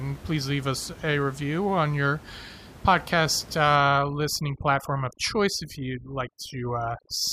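From 3.76 s to the end, overdone noise removal is audible. A noise reducer set far too strong shuts off frequency bands near its noise estimate. Room noise, about 19 dB below the speech, drops and breaks up into twinkling specks. Quiet speech detail vanishes.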